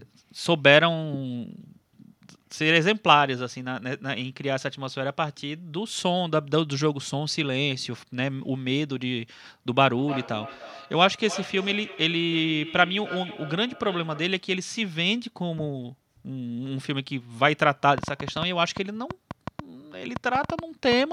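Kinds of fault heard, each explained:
Feedback echo between two devices: From 9.8 to 14.5 s the speech returns about every 0.3 s, thinner and ringing, at about 14 dB below speech, because a nearby device replays it into the microphone.
Train of clicks: From 18.0 to 20.9 s around twenty sharp ticks, roughly six per second at uneven spacing, reach about 10 dB above the speech, likely from electrical interference or a struggling interface.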